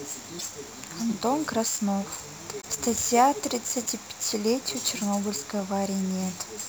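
Right from the start there's sample clock jitter: the converter's timing wobbles by around 7 microseconds, so steep parts of the waveform land wrong, leaving a rough hiss about 15 dB under the speech that swells on loud, bright sounds and disappears in pauses.

At 0.38 to 0.44 s and again at 2.60 to 2.65 s the audio skips ahead with a brief glitch. That's likely a broken MP3 bit reservoir, with dropped 26 ms frames leaving the next ones decoding borrowed bytes from the wrong place.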